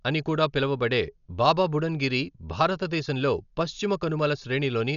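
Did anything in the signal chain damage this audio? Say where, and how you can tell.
Yes, at the codec stage, all the way through the speech: nothing reaches above 7 kHz, so it sounds dull, with a rough, fluttery noise around tones. That's likely Dolby Digital compression starved of bits, which fits about 48 kbps, with empty bands backfilled with dither noise.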